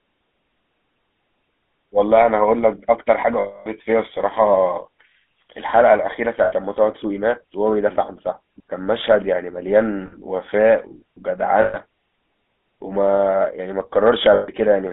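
From the start, the whole recording carries GSM full-rate codec damage, plainly audible throughout. The line passes roughly 200 Hz to 3.5 kHz. The voice has a buzzy, gravelly grain because the coder rebuilds it from a vocal-tract model fed by coarse, evenly spaced pulses. Its character fits a 13 kbps full-rate coder. A plain telephone band-limit would only sound thin and muffled, without this rasping texture running through every voiced sound.

Lost GSM frames interrupt the sound at 3.4 to 3.67 s, 6.44 to 6.53 s, 10.06 to 10.15 s, 11.62 to 11.77 s and 14.34 to 14.5 s. In each gap the decoder repeats the last good frame, so the sound smears into a rough, metallic ring instead of breaking off. The longest gap lasts about 260 ms. Unlike a simple dropout or a click, there is no hard edge, just a sustained buzz.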